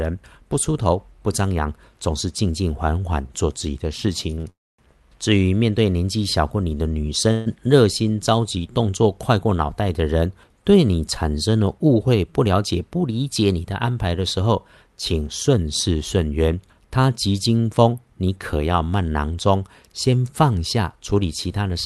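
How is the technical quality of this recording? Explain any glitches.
The recording has clear network-delivery problems: a burst of stuttering and two freezes in the first half, then two stretches where playback is hurried along. The speech passes through a call codec whose top end stops around 12 kHz, which fits Opus.

Repeated stalls (stutter), 4.31 to 4.46 s: packets arrived late three times in quick succession, so the jitter buffer kept running dry. The receiver stretched the last sound to cover 63 ms, with the longest gap 25 ms, making the speech catch and drag briefly.

Call audio freeze, 4.50 to 4.80 s and 7.32 to 7.48 s: most likely packets were held up in transit and the buffer emptied completely. At 4.50 s the receiver fills 287 ms, fading to silence for 240 ms. At 7.32 s it fills 134 ms with the continued last sound and no silence. Both push the following speech later without losing any of it.

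Jitter buffer speed-up, 12.26 to 13.11 s and 15.49 to 17.05 s: the buffer held more audio than it targets, so the receiver trimmed tiny pitch-period slices to catch up. The first stretch plays at 110% speed, shedding about a tenth of a second, and sounds noticeably rushed. The second runs at 103%, removing about 50 ms, which is under the roughly 105% where it starts to sound hurried. Pitch stays unchanged in both.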